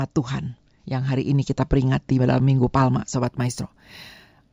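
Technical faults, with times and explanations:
3.26–4.52 s, imaging from linear upsampling: straight-line interpolation, consistent with a 16 kHz source raised to 48 kHz, dulls the top and leaves mirror images at 8–16 kHz, roughly 20 dB down, giving sibilants a faint metallic shimmer.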